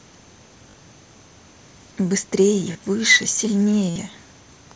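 Short buzzy held tones replace the speech at 0.71 to 0.74 s, 2.73 to 2.75 s and, longest at 60 ms, 3.90 to 3.96 s, each ending in a slight warble. This is concealed Bluetooth headset packet loss: lost mSBC voice packets were bridged by repeating recent matching waveform.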